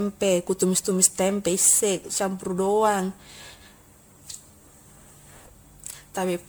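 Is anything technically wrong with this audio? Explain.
Yes. Throughout, the speech sounds swirly, hollow and smeared, with blurred attacks and nothing above 19.9 kHz: generation loss, likely from around ten successive MP3 re-encodes near 128 kbit/s.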